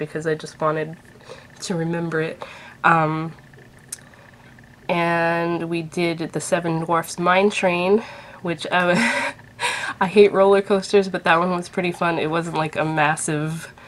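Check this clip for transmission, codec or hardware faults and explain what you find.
Nothing in the clip points to a transmission, codec or hardware problem.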